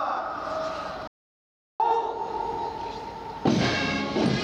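The sound cuts off abruptly at 1.08 s and falls into complete silence, with no room tone at all, until it resumes mid-flow at 1.80 s. This audio dropout to silence erases about 0.72 s of material, most likely because the input signal was briefly lost while the recorder kept writing silence.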